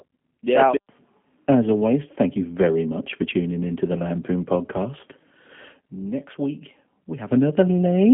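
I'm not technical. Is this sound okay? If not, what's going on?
No. The whole recording has gone through the G.729 codec, a phone-call compressor that rebuilds the speech from a rough model of it. Everything above about 3.6 kHz is gone, so it sounds muffled and phone-like, with a slightly rough, synthetic edge you can plainly hear.

On top of that, there's a loudspeaker feedback squeal from 4.28 to 7.45 seconds. A microphone picked up its own speaker, and one high tone, near 5.3 kHz, fed on itself. It swells over roughly a second and a half until it's louder than the speech.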